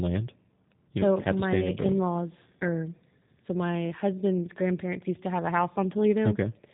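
G.729 codec coding runs throughout: speech is rebuilt from a vocal tract model and sparse pulses, fitting 8 kbit/s, so it sounds plainly rough and synthetic, with nothing above 3.8 kHz.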